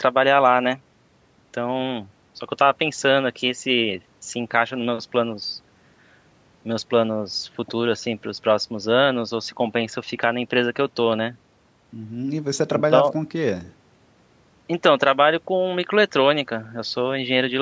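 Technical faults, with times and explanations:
Nothing stood out on listening to this speech, which comes through the call's usual microphone processing with its top end stopping at 8 kHz.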